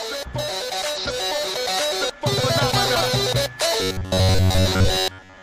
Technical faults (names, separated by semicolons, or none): compressed frames skipped; robotic sound from repeated short buffers